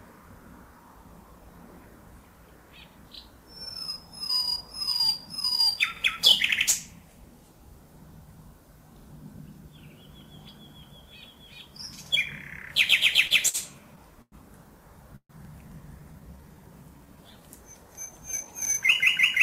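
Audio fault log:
5.97 s, 12.06 s, 15.45 s and 18.65 s: overlapping chunks. At each of these joins, a slice of about 48 ms plays twice, heard as a brief click or stutter. The pattern fits audio handled in chunks of about 3 s, where each new chunk starts slightly before the previous one finished. The overlapping stretch is therefore output once at the end of one chunk and again at the start of the next.
13.27–13.33 s and 13.48–13.57 s: short stall from a late packet. The sound is held too long here, by 28 ms in the first stall and 54 ms in the second, with a faint buzz or dip in level. The receiver's jitter buffer ran dry when a packet was due. It stretched the last sound until the packet arrived and then carried on from the same point, so nothing is lost and the audio simply runs later by those amounts.
14.22–14.35 s and 15.16–15.32 s: call audio freeze. The sound stops moving and its tail carries on as a fading buzz or hiss. 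The filled stretch is 101 ms in the first freeze and 134 ms in the second, and each ends in silence lasting about 50 ms and 70 ms respectively. The audio then resumes exactly where it stopped. The likely cause is packets held up in transit, emptying the jitter buffer, so a gap is inserted into the audio rather than anything being dropped.
16.00–16.56 s and 16.98–17.41 s: jitter buffer slow-down. The sound drags, playing at about 87% speed in the first stretch and 85% in the second, while the pitch stays the same. These stretches add 80 ms and 75 ms of time. The receiver was rebuilding its reserve of buffered audio by repeating single pitch periods or slivers of pauses many times in a row.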